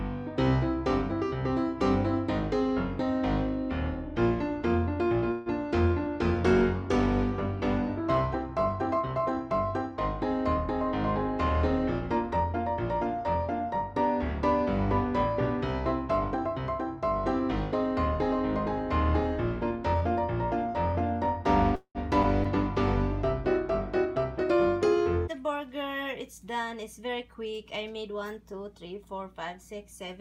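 At 5.31 s the audio stalls for 145 ms, the last sound carried on as a brief fading buzz before it resumes exactly where it stopped, with nothing lost. This is a call audio freeze, likely from delayed packets draining the jitter buffer, which adds a gap rather than removing content.

From 6.26 to 9.52 s a call bitrate drop takes the encoder from 128 kbps to 22 kbps, holding the lowest rate for about 3.2 s. The coarser coding makes the sound rough and watery, with the top end noticeably dulled until the rate climbs back.

Between 19.71 and 20.94 s a jitter buffer speed-up runs the audio at 104% by cutting short pitch-period slices, trimming around 70 ms of excess buffered delay. Pitch holds and the pacing is only marginally quicker.

At 21.75 to 22.48 s repeated packet loss produces a choppy, robotic stretch: three holes, the longest 194 ms, patched by extending the preceding sound, with 212 ms concealed and 80 ms gone outright, 29% of the span.

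Right after, from 22.50 to 25.65 s, a second call bitrate drop falls from 128 to 26 kbps, bottoming out for 1.64 s and leaving the sound muffled and grainy.

Inside that stretch, 24.05 to 24.66 s, and again at 27.23 to 28.10 s, further jitter buffer speed-ups run at 108%, removing roughly 50 ms and 70 ms respectively, giving a brief rushed quality at unchanged pitch.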